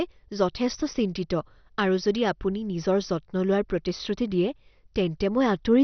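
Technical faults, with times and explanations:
Throughout, MP2 compression: the speech was likely squeezed through an MPEG Layer II encoder at a very low rate, around 48 kbps, which starved its sub-bands of bits, so nothing survives above about 6.1 kHz and the remaining bands sound gurgling, granular and heavily damaged.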